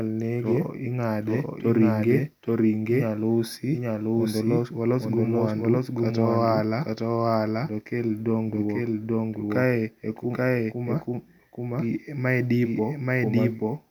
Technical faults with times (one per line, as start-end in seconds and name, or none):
0.00-13.91 doubled audio track